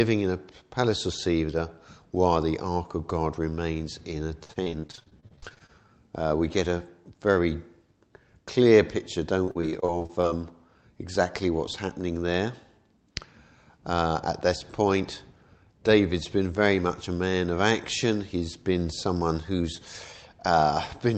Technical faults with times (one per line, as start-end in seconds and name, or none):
4.43-5.70 repeated packet loss (robotic sound)
9.44-10.25 repeated packet loss (robotic sound)